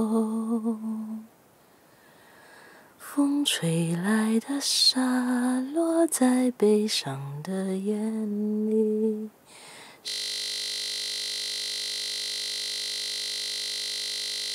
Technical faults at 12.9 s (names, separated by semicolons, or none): system hang loop